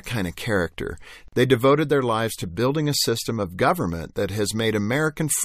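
At 1.28 s the speech stops dead for about 43 ms and resumes at 1.33 s. This is a gap at a join of encoded pieces: two separately encoded segments were spliced without trimming the encoder's start-up delay and end padding, so that silence remains in the stream. Unlike a dropout, nothing is missing. The speech carries on exactly where it broke off, and the cut edges are smeared by the codec.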